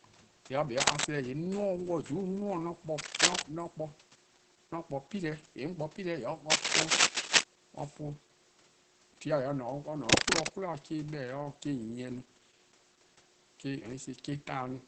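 From start to finish the speech carries Opus voice compression damage, plainly audible, which fits a SILK-mode encoder running at around 12 kbps. The band stops near 8 kHz, so sibilants lose their top edge, and the coarsely coded excitation makes voiced sounds hoarse and slightly robotic. A simple low-pass filter would only dull the sound. This one also roughens its texture. The faint room noise, about 32 dB below the speech, comes through with a burbling quality.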